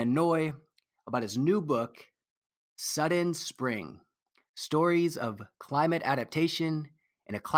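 No technical faults can be heard anywhere in the speech recording. Nothing in the audio calls for comment.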